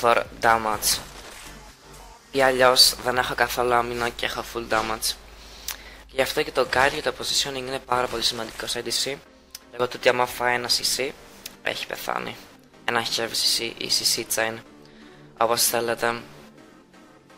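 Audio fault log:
No faults heard in this clip.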